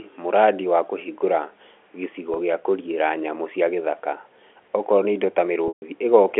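A brief held, buzzy smear at 2.34 to 2.36 s, lasting 20 ms, and a longer one at 5.68 to 5.82 s, where the sound hangs, fades into silence, then returns with a short cross-fade. This is packet loss with pitch repetition: audio was lost (140 ms in the second gap, which fits about 14 packets) and the receiver looped the last pitch period, fading it over roughly 50 ms. The telephone-band G.711 coding runs throughout, keeping the sound within about 300 to 3400 Hz.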